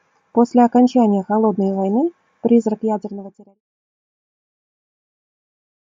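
Nothing in this speech clip counts as a technical fault; the level just eases down in an ordinary smooth fade-out that begins around two and a half seconds in and is finished by 3.61 s, with no click or hard edge.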